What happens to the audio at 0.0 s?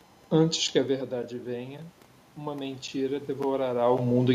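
Nothing goes wrong at 0.0 s: the speech starts intact, with only the room's own background noise beneath it.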